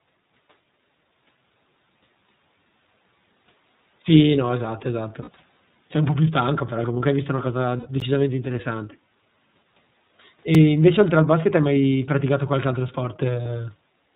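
The whole clip is speech passed through the iLBC codec. Nothing above 4 kHz survives, so it sounds muffled and narrowband. The damage is plainly audible, a rough, synthetic edge. The coding fits iLBC's 13.33 kbps mode with 30 ms frames.

At 5.22 s comes the first stretch of lost iLBC frames, about 60 ms, which fits two missing frames. The decoder repeats the last pitch cycle mixed with noise. It sounds like a brief held, buzzy vowel.

A longer loss starts at 7.77 s and lasts about 90 ms, which fits three frames. The concealment holds and fades.

At 8.00 s a block of digital silence cuts in for about 14 ms. The sound drops out and back with no fade. It is heard as a tick or dip. That points to an output buffer not filled in time.

A second block at 10.55 s lasts only about 3 ms. It comes across as a single tick.

At 13.43 s one more iLBC frame is lost, about 30 ms. The gap is a short buzzy hold. 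Because each frame is coded alone, the speech comes back almost at once.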